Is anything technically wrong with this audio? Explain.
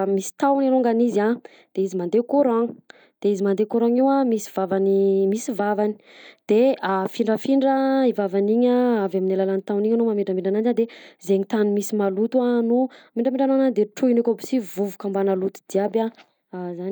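No, nothing stood out as technically wrong on listening to this speech recording.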